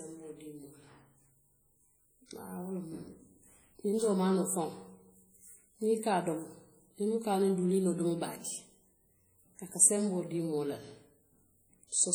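WMA compression runs throughout the speech: heavy ringing, washy smearing and hiss that follows the signal, likely from coarse transform quantisation at a bitrate around 32 kbps.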